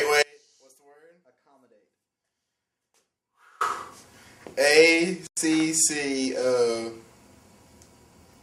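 The signal path likely lost its source from 0.23 s to 3.61 s while the chain after the break stayed live, producing an audio dropout to a faint residue. For roughly 3.4 seconds the sound cuts out abruptly rather than fading, and the gap is not silent: a faint leak of the sound remains, around 35 dB below its normal level, before full level returns just as suddenly.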